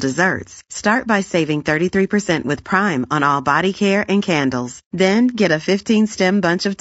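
From start to finish the speech has a rough, grainy texture, with a noisy haze filling the gaps between the pitch harmonics and a top band that sounds thinned and less natural. This points to low-delay AAC compression, likely AAC-ELD as used for video calls, and the degree of damage fits a bitrate near 32 kbps. At this low bitrate the spectral lines are quantised coarsely, so quantisation noise spreads between the harmonics and the coarseness stays plainly audible throughout.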